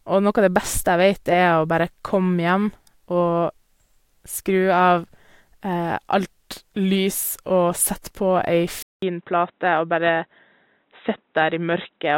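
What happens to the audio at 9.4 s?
At 9.4 s the speech is inside a stretch running from 8.82 s to the end, where a 200 ms gap is followed by audio with nothing above 3.9 kHz, a faint new noise floor, and roughly unchanged level. This is likely the input switched to a poorer device.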